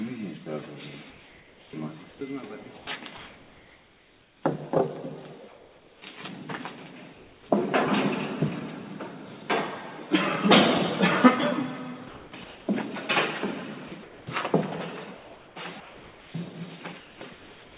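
Comfort noise in place of the background runs from 1.1 to 4.43 s, 5.48 to 6.02 s, 7.13 to 7.49 s, 12.08 to 12.68 s, 13.88 to 14.27 s, and from 15.17 s to the end. The likely cause is discontinuous transmission. In each pause the sender went quiet and the receiver filled the gap with synthetic noise matched only roughly to the room. The real background, with its texture, gives way to a flat, even hiss for about 2.1 s in the first stretch and about 1.6 s in the last. At 5.48 and 7.13 s, where the background sits about 26 to 27 dB below the loud parts, the substitute is about 3 dB quieter than what it replaces.

Sound dropped by the voice detector occurs at 13.88 s, where 30 ms of real sound is lost. The detector likely judged that sound to be background and stopped sending. Comfort noise covers the hole, so the sound is clipped short and slides into steady hiss. Across the clip, nothing reaches above 4 kHz, which fits a narrowband G.711 call path.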